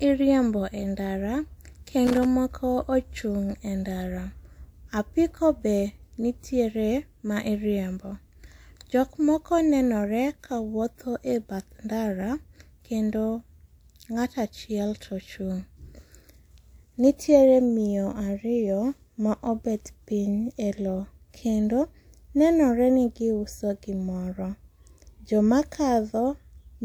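From 2.07 to 2.25 s, just before "moko ochung' e ndara", the speech breaks into an irregular burst of crackle and scratching, lasting about 0.18 s. This is loose connector crackle: a worn or dirty contact in the signal path repeatedly makes and loses contact as it moves, chopping the audio on and off. Unlike evenly spaced digital clicks or a single clean dropout, the interruptions here are ragged and uneven in timing, which points to a physical contact.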